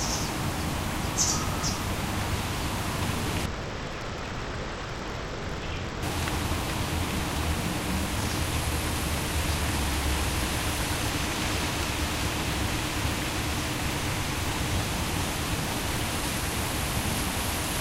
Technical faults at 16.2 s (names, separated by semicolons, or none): none